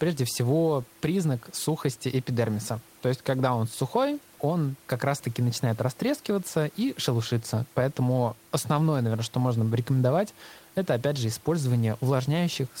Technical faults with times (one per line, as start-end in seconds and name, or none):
none